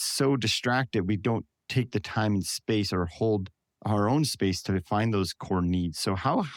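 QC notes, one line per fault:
No technical faults detected.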